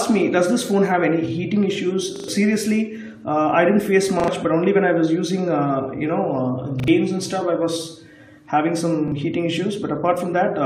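Audio arrived late four times, so the device played its last buffer again: repeated buffer stutters at 2.16 s (three extra plays), 4.2 s, 6.8 s (two each) and 9.1 s (one). Each is a hard-joined repeat of a segment fitting a 40 ms buffer, skipping roughly a tenth of a second or less.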